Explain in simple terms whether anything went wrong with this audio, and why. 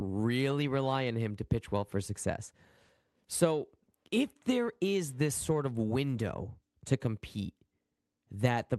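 Nothing went wrong; this speech came through as expected.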